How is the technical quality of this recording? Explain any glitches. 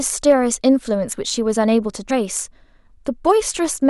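The speech has two short dropouts where compressed frames were skipped, at 1.12 to 1.15 s and at 2.09 s. Missing or rejected frames make the audio jump ahead, by about 20 ms and then about 70 ms. A spectrogram shows an abrupt vertical seam, and the waveform shows a discontinuity.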